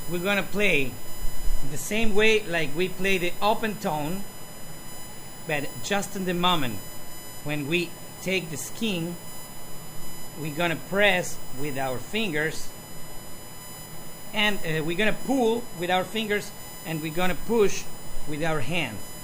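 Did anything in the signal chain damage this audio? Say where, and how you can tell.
Yes. USB whine throughout: a fixed 1 kHz tone, strongest at its 15 kHz harmonic, around 20 dB below the signal, as 1 ms bus frames leak into analogue power or ground.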